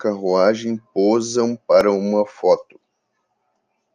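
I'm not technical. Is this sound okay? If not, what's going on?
No. At about 1.81 s, just before "uma foto", there is a tiny click, almost a brief buzz. This is a repeated buffer: new audio didn't reach the playback device in time, so it replayed the last tiny chunk it had, about 1.33 ms long (which fits a 64-sample buffer), two extra times. Because each piece is so short, the repeats and their hard joins blur into a click rather than a stutter. No speech is lost.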